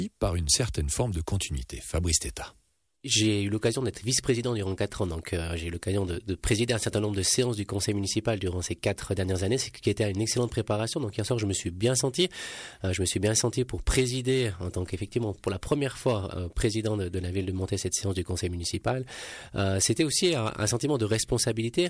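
No technical faults can be heard anywhere in the audio; the signal stays steady and intact throughout.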